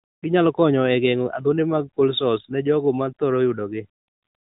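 Speech over an AMR narrowband mobile link, band-limited to about 3.8 kHz as that path dictates, with no technical faults to report.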